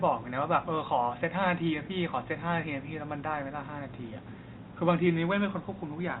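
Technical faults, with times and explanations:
No technical faults are audible.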